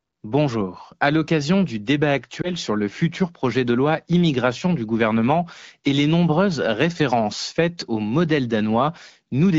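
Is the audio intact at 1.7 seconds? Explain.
Yes, the audio is intact at 1.7 seconds, with no dropout, click or other fault at that moment.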